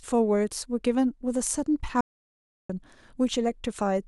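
At 2.01 s the speech cuts off mid-flow into an audio dropout to silence lasting 0.69 s, until 2.69 s, likely from the input briefly being lost while recording continued. Unlike a natural pause, the gap holds silence with no room tone.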